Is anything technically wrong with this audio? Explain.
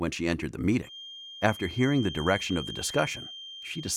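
Yes. A feedback whistle runs from 0.80 s to the end of the clip. A loudspeaker-to-microphone loop is likely sitting right at the edge of feedback. One frequency keeps circling and reinforcing itself, but it never gains enough to run away into a howl. What you hear is a thin, steady tone at 3.2 kHz behind the sound. It stays roughly 15 dB below the main signal and swells and fades slowly in level.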